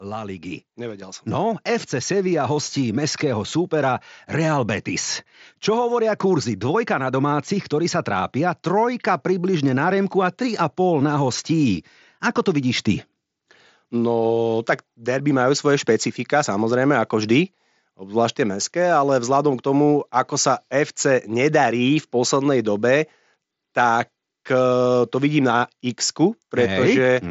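Microphone volume stepped up at 1.02 s: the input gain rose about 8 dB in one step, so speech and background jump louder together, heard through the band-limited mSBC Bluetooth headset path.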